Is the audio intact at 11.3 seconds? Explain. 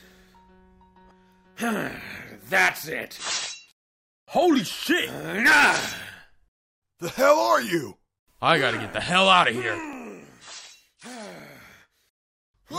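No. From 9.44 to 12.38 s, periodic USB or driver dropouts stall the audio path every 0.49 s, skipping about 10 ms each time, so 11.3 s falls among regular ticks.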